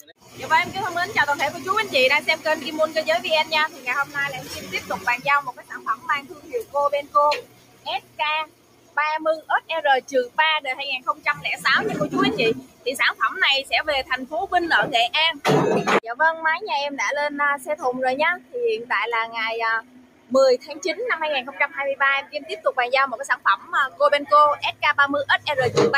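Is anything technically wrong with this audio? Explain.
Yes. Throughout, the level pumps and sags, with held sounds and tails sinking by about 15 dB while attacks survive. This is a noise suppressor applied to music or sounds, treating steady material as noise.

Sound cut by the noise suppressor occurs at 0.0–0.41 s, 3.68–11.65 s, 12.58–14.26 s, 17.58–18.55 s and 19.81–25.46 s. In these stretches, sustained parts drop by up to about 16–17 dB and decays are cut short, because the suppressor judged them to be noise.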